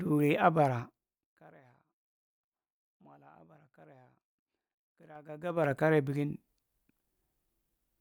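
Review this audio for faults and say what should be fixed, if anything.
Gain moved in unsmoothed 3 dB steps, about fifteen per second across roughly 25 dB, producing zipper noise that ticks over the speech from 5.12 to 5.72 s.

To prevent it, ramp gain changes per sample or interpolate them across each buffer instead of jumping once per block.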